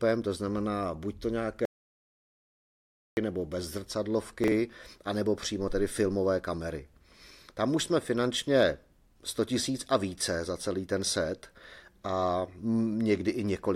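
From 1.65 to 3.17 s the speech drops out to silence for about 1.52 s before resuming at "nebo bez". The gap is silent with no room tone, which separates it from a quiet pause; the likely cause is a lost input while recording continued. That stretch of speech is gone.

At 4.44 to 4.52 s, just before "anebo přímo tedy filmové", chunks are out of order: a 40 ms block plays one chunk late. Unlike a dropout or repeat, nothing is missing or doubled. The sound jumbles briefly, with three hard joins.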